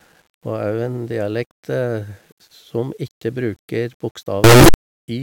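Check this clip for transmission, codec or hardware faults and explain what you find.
One fault stands out, near the end of the speech. From 4.44 to 4.74 s the audio turns into a blast of very loud, harsh distortion, with the quieter moments just as loud as the peaks. The likely cause is signed and unsigned mixed up: 8-bit samples read with the wrong sign convention get their top bit flipped, so every pass through zero becomes a jump across the full range.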